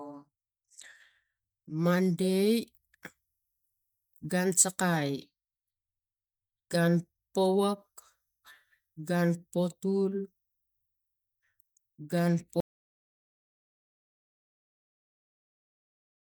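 A speech recording in which the sound cuts off abruptly at 12.60 s into total silence, with no room tone, through the end. This audio dropout to silence likely comes from lost input, such as a disconnected device or stray mute.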